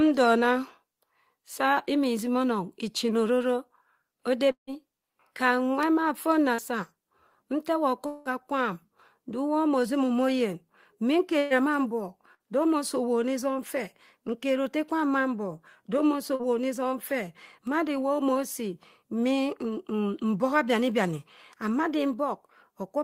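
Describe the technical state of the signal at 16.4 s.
A brief smeared wobble in the speech runs from 16.35 to 16.42 s, a short concealed packet loss. About 40 ms of audio arrived too late to decode, so the receiver synthesised roughly 38 ms by extending the preceding sound, then crossfaded back into the real signal.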